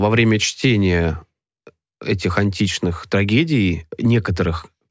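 Nothing goes wrong anywhere in this bit of speech, so there's no fault to point to at any moment.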